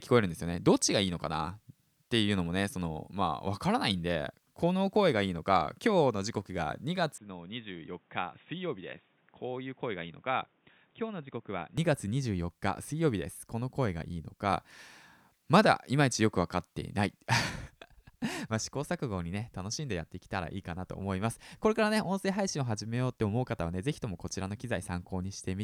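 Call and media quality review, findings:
Speech goes dull and boxy 7.18–11.78 s, nothing above 3.8 kHz, level down about 10 dB, faint new background noise well under the speech. No gap at either switch. Likely input switched to a poorer device, narrower-band mic path, then back.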